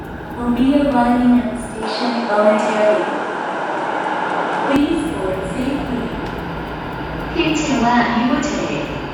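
From 1.83 s to 4.76 s the sound turns duller, with nothing above 10.5 kHz, a level shift of roughly 5 dB and a new, faint noise floor around 35 dB down. There is no gap at either switch. Likely cause: the input switched to a poorer device.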